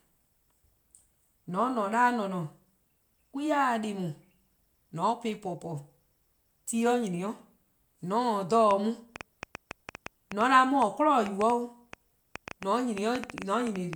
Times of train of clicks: 8.71-13.94

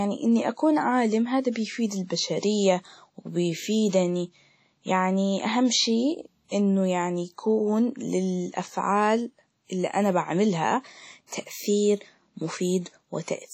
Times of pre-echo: 1.51-1.56, 6.48-6.51, 11.27-11.32

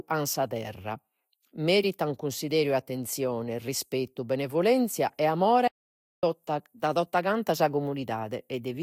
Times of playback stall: 5.67-6.23

